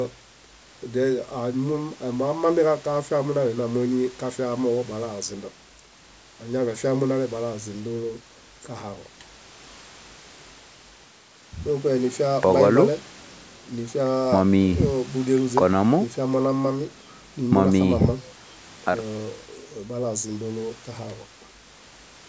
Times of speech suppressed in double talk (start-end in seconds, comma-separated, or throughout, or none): none